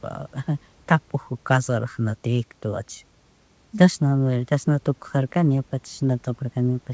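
Speech carried over a wideband call path, with nothing above 8 kHz, which fits G.722 at 64 kbps, and room noise about 38 dB below the speech; no faults to report.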